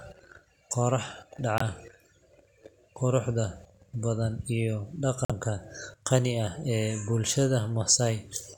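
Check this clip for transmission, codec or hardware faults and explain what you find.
Two short gaps in the speech point to a Bluetooth dropout. Packets carrying the audio likely failed to reach the headphones in time, so the receiver had nothing to play and the output fell silent until good data arrived. The first hole runs from 1.58 to 1.62 s, about 40 ms, consistent with one lost frame of about 23 ms. The second, from 5.25 to 5.32 s, lasts about 65 ms and fits two lost frames. Each sounds like a brief cut, with the speech picking up further along as though it had kept playing.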